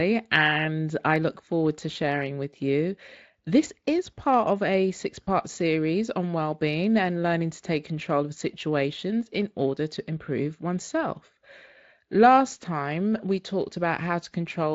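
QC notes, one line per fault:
1.93–1.96 s and 5.23–5.27 s, VoIP packet loss concealed by the speech codec: After "I look forward to" and after "of a six", about 20 ms and 40 ms of audio went missing, consistent with one and two lost 20 ms frames. The decoder extended its last pitch and filter at falling gain, so each gap sounds like a brief stretched, fading smear. On the spectrogram, harmonics flatten and dim. The waveform shows a shrinking periodic patch before the voice recovers, still weak for tens of milliseconds, at "with you" and "series on", against the Speex stream's light coding texture.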